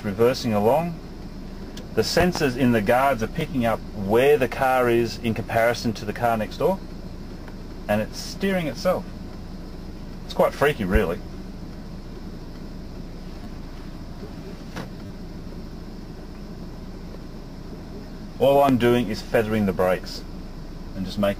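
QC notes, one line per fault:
2.21 to 2.39 s, loud pop: two sharp pops in quick succession, about 20 dB above the surrounding sound, which carries on underneath. This is likely a sudden voltage step or pulse, from a plug, a switch or static, added to the signal, with the following circuits shaping each pulse into the pop heard here.
3.41 s, repeated buffer: a single click where a 10 ms piece of audio plays twice with a hard join, because new audio arrived late and the device replayed the last buffer. Nothing is lost, since the sound resumes where it stopped.
13.44 to 13.46 s, repeated buffer: a very short buzz as the same 10 ms piece plays three times in a row, a 100 Hz repeat rate, with hard joins at each restart.
15.06 to 15.10 s, repeated buffer: a longer buzzy stutter, the same 10 ms piece playing five times over 50 ms, again with nothing missing afterwards.
18.69 to 18.73 s, loud pop: one sharp pop, about 20 dB over the sound beneath it. 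This is likely another brief voltage pulse reaching the signal path.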